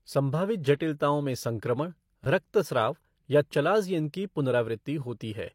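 At 2.24 to 2.26 s a repeated buffer occurs: a 10 ms block replays twice more, about 20 ms lost, showing identical repeated slices with hard vertical joins.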